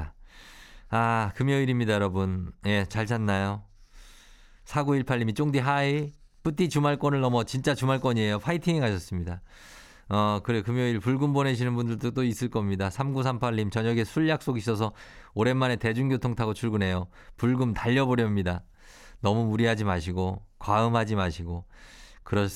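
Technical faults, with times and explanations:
No technical faults can be heard in this speech recording. There is nothing here to place at a time or to explain.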